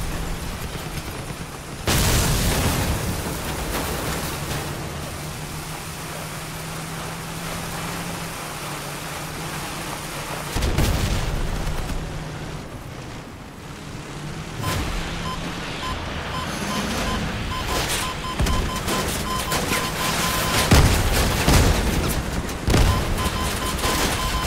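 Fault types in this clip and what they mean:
No fault types occur in this clip.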